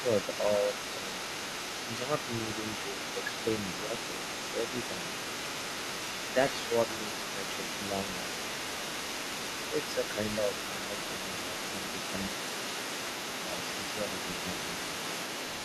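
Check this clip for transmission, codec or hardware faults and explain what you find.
Two related faults are audible in this speech clip, both pointing to the echo canceller on the talker's side.

Other side's voice leaking through: a second voice runs underneath for the whole clip, only a few decibels quieter than the main talker. The likely cause is the far end playing on a loudspeaker and the echo canceller leaving much of it in the microphone signal.

Speech suppressed in double talk: at 0.42 to 1.13 s, 3.82 to 4.13 s, 10.4 to 10.51 s and 13.21 to 13.51 s, the talker's voice briefly dips by a few decibels in short pieces. This likely happens because both sides speak at once and the canceller turns everything down.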